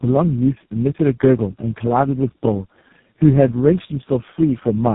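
Throughout the speech, tandem speech coding is audible. The sound appears to have passed through three speech codecs in a row, each re-encoding the last one's damage, leaving it rough, muffled and warbly. A spectrogram shows nothing above 3.8 kHz and smeared, blotchy harmonics.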